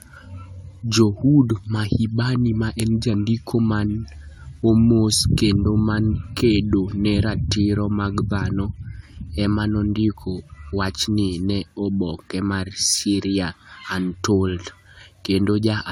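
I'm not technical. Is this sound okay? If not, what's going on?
No, the speech sounds swirly, smeared and hollow from start to finish. That's generation loss, likely from being compressed and re-saved around four times over.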